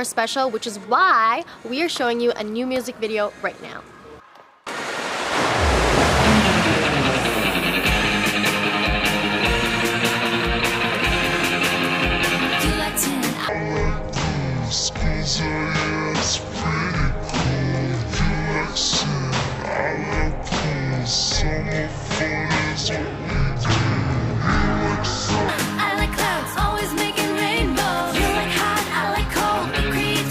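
Stereo read as mono, from 13.49 to 25.49 s: interleaved left and right samples are taken in sequence as one channel, so the sound plays at half speed and drops a full octave, with a faint mirrored image appearing in the upper spectrum.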